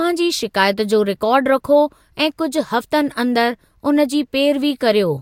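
No technical faults can be heard anywhere in the speech recording; the signal stays continuous and stable throughout.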